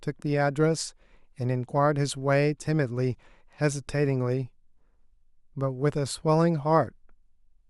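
Nothing is technically wrong with this speech recording.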